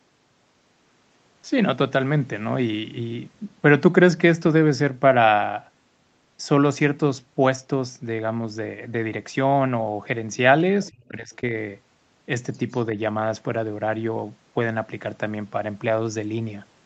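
A speech clip, band-limited to nothing above 8 kHz by normal call microphone processing, with faint traces of the other side's voice leaking through, from 10.86 to 10.90 s and again from 12.53 to 12.75 s. They sit roughly 30 to 35 dB under the talker, so they're quiet but there, most likely loudspeaker echo the canceller didn't fully remove. Right after the first one, from 10.90 to 11.42 s, the talker's speech is suppressed in double talk, dipping by as much as around 30 dB across roughly four tenths of a second. That's likely the canceller mistaking overlapping speech for echo and turning everything down.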